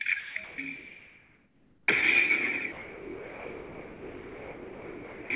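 At 0.20 to 0.36 s and again at 0.44 to 0.58 s, the sound gives way to smooth, steady noise. The likely cause is sound dropped by the voice detector. On a spectrogram, the detail vanishes into an even, structureless wash.

From 0.76 to 1.88 s, the real background, about 32 dB below the loud parts, is replaced by featureless noise about 1 dB quieter. This is likely comfort noise in place of the background, and it shows as a flat, textureless band.

From 2.72 to 5.30 s, the same detector dropout likely returns and runs almost to the end. The waveform flattens to a low, uniform envelope.

Throughout, nothing appears above 4 kHz, which fits the narrowband call codec.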